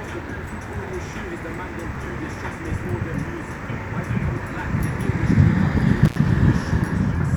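From 6.05 to 6.16 s, an intermittent contact: a loose plug or cable briefly opens, cutting the sound out for about 82 ms with crackle at each edge.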